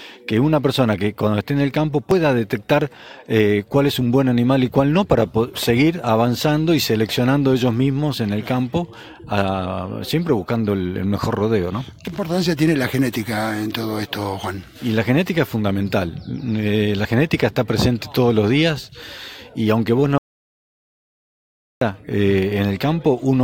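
At 2.11, 7.09, 12.07 and 17.05 s the sound skips forward abruptly, a sliver of roughly 20 ms vanishing each time. The even spacing of about 5 s points to audio missing between chunks, likely from a recorder or processor losing a fragment each time it closes one block and opens the next. The two sides are butted together with no pause between them, so each one is a tiny jump rather than a hole in the sound.

From 20.18 to 21.81 s, about 1.63 s, the audio cuts off mid-flow and then returns just as suddenly. This is an audio dropout to silence, likely caused by the input signal being lost while the recording carried on writing silence. The gap is silent with no room tone at all. That sets it apart from the chunk skips, which remove almost nothing and leave no silent stretch, whereas here a clear span of sound is lost outright.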